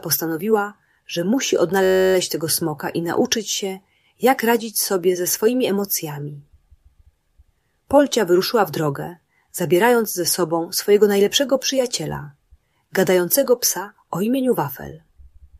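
A system hang loop interrupts the audio from 1.84 to 2.14 s. For about 0.3 s, one tiny slice of sound repeats exactly, 29 times over. Each repeat lasts 10.67 ms, which fits a 512-sample buffer. At a loop rate of 93.8 Hz, the result is a steady, low buzz rather than a stutter. The computer or driver froze while the sound hardware kept replaying its ring buffer. Little or no audio seems lost.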